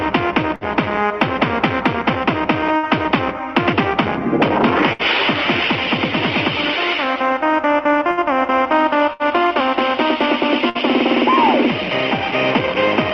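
Bursts of packet loss occur at 0.55, 2.77, 4.93, 8.11, 9.13 and 10.69 s. Each time the receiver concealed a 54 to 63 ms gap by extending and fading the last sound, then resumed with about 60 ms of audio skipped, over a call path whose top end stops near 12 kHz.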